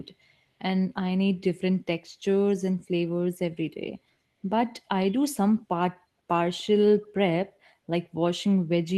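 At 6.58 and 7.02 s you get two short bursts of echo leak, each about 50 ms: a faint copy of the speech trailing by roughly 0.3 s, very quiet, well below the voice. Likely a far-end speakerphone whose echo canceller let a scrap slip back.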